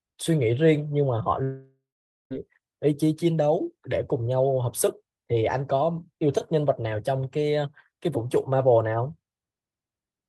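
At 1.43 s the speech suddenly gives way to a buzzy smear of the last sound that fades out, then 0.47 s of near-silence, until it picks up at 2.32 s with 0.88 s simply gone. That's likely a long network dropout, where the receiver papered over missing packets.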